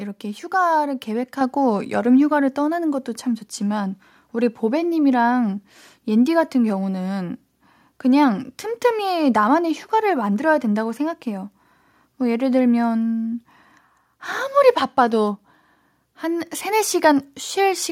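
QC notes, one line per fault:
1.41 s, microphone volume stepped up: speech and background jump together by about 6 dB in one step, as call software raised the microphone's input level.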